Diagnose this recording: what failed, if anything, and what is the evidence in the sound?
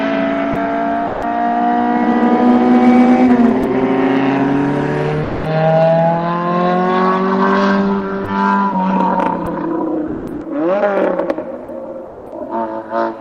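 The sender's voice detector most likely treated stretches of real sound as background and stopped transmitting, so these are sounds dropped by the voice detector at the call-processing and codec stage. The audio gives way to steady comfort noise at 0.53–0.55 s, 1.07–1.22 s, 3.62 s, 5.23–5.45 s, 8.24 s, 9.45 s and 10.07–10.41 s. The gaps run from 10 ms up to about a third of a second near the end, where nearly all of it is lost.

There's also hard clipping, where the signal overran what a gain or conversion stage could pass and the peaks got sliced flat. The longest run is 2.07–4.18 s, pushed about 6 dB over. Shorter bursts come at 9.00–9.27 s, about 5 dB over, and at 10.84–11.31 s, about 3 dB over, where it's more crackle on the peaks. Those flat tops are what throw the extra high harmonics.

Near the end, from 11.64 to 12.32 s, the sound gets chopped by the voice detector. It's choppy there rather than a single gap: the detector likely flipped between sending and not sending more than once over that stretch. 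About 300 ms of it is replaced by fill.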